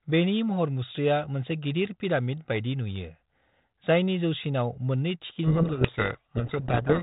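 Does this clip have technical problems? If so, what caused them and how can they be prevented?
Yes. From 5.44 s to the end, there's a codec payload misread: the G.726 code words are packed in the wrong bit order, so the decoder rebuilds nonsense values and the speech gets buried in harsh distortion. To prevent it, make sure both ends agree on G.726 bit packing, ideally by negotiating it explicitly at call setup.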